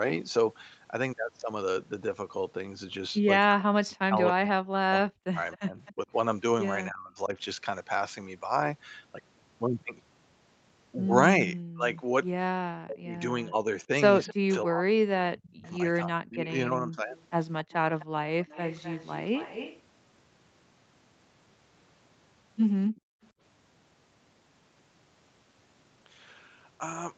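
Speech carried over a call, with the echo canceller causing several faults. Speech suppressed in double talk runs from 3.46 to 7.36 s and from 11.73 to 17.03 s, likely because the canceller ducked the talker while the far side spoke. Level falls by up to about 40 dB, which shows as gaps and thinned patches in the waveform and spectrogram. Echo leak, likely from a loudspeaker whose canceller left residue, adds a faint copy delayed by 258 ms at 5.52–5.93 s, 14.27–14.33 s, 15.5–15.71 s, 17.13–19.82 s and 22.96–23.01 s. It sits roughly 15 to 35 dB below the speech and appears as shifted ghost harmonics on the spectrogram. Background gated by the echo canceller drops the room sound by about 35 dB from 22.95 to 23.22 s, a brief notch in the noise floor.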